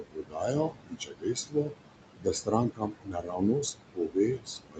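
A noise suppressor in the call chain is pulling the background down by about 21 dB frame by frame, and the room noise, which sits only about 9 dB under the speech, does not stay level. It sinks in the gaps and swells back beneath each phrase, and the speech is band-limited to about 8 kHz as expected on this Opus call path. These are noise suppressor artifacts. The suppressor is also mistaking parts of the speech itself for noise, so it cuts speech along with the background. This happens from the start to 1.79 s, where roughly one and a half seconds are pushed down by up to about 22 dB. Shorter cuts follow at 2.18–2.53 s (about 18 dB, a brief dip), at 2.7–3.43 s (up to about 22 dB, over most of that stretch), and from 3.61 s to the end (about 21 dB). In those spans, syllable edges and quieter stretches sound swallowed and faint.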